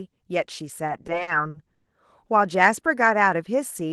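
Repeated stalls (stutter) run from 0.87 to 1.88 s of the speech. Packets reached the receiver late or more slowly than playback consumed them, so the jitter buffer drained ten times in that second. Each gap was bridged by stretching the last sound, with the longest hold near 120 ms faded down. About 290 ms, roughly a third of the span, is filled in this way and nothing is lost, but the speech drags and hiccups. The Opus call path's high-frequency cut-off near 12 kHz applies throughout.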